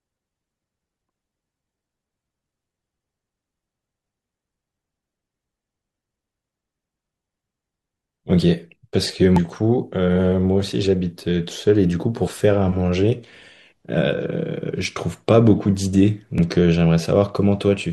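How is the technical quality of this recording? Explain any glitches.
The speech recording has four short glitches from damaged data in a compressed stream, at 1.09 s, 9.36 to 9.38 s, 12.27 s and 16.38 s. Each is a brief chirp or blip lasting no more than about 20 ms. In each case part of the compressed data was corrupted, so the decoder could not read those frames correctly, lost its place, and had to find the next valid frame header. The garbled frames produce the glitch.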